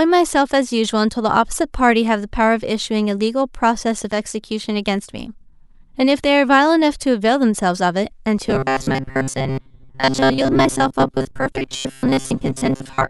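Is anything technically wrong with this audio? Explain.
Yes. From 8.47 s to the end at 13.10 s, the speech becomes a rigid, metallic buzz pitched at 133 Hz that only loosely tracks the words: robotic sound from repeated short buffers. The likely cause is a roughly 7.5 ms chunk being replayed while most of the real audio is skipped.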